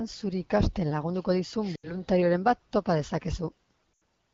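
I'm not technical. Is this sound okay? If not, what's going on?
No. There are two brief faults called lost AMR speech frames, at 1.75 to 1.94 s and at 3.93 to 4.01 s. During a phone call, radio errors damaged small chunks of the speech, about 80 ms in each case. The phone's decoder filled each gap by repeating the last good sound at falling volume, so the speech smears, then quickly fades. In this HD Voice call that fade is fast, and the speech sounds weak or rough for a moment as it returns.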